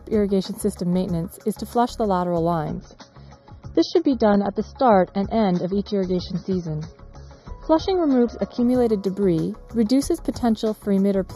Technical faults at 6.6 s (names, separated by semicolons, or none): channel delay (comb filtering); adaptive stream at a lower bitrate